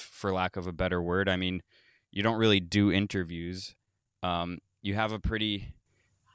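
Nothing in this speech recording stands out as a technical problem; it just runs along without any glitch worth pointing to.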